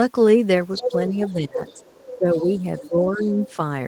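From 0.78 to 0.92 s a second voice breaks in, nearly as loud as the speech. This is the other side's voice leaking through, likely far-end echo the canceller left in the microphone signal. From 1.09 to 1.6 s the speech ducks by roughly 15 dB, speech suppressed in double talk, likely because the canceller turned everything down while both sides spoke. From 1.26 to 3.55 s that leaked voice lingers faintly underneath. The speech dips again from 2.08 to 2.5 s, by about 20 dB, and from 2.81 to 3.3 s, by about 10 dB.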